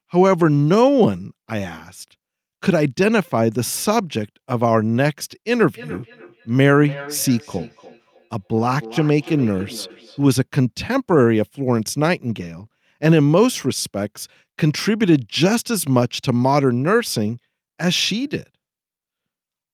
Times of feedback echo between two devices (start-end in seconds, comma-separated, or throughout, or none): 5.52-10.27